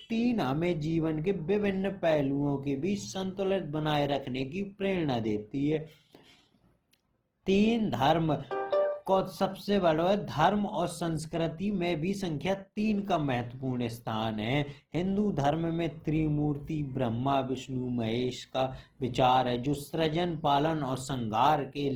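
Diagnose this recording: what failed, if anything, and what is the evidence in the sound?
The codec stage is the likely culprit: Opus compression throughout the speech, plainly audible as grainy, rough, noise-textured tone rather than swirl. A spectrogram shows full bandwidth to about 20.2 kHz, bands filled with noisy texture, few holes, consistent with a music-mode encode near 16 kbps.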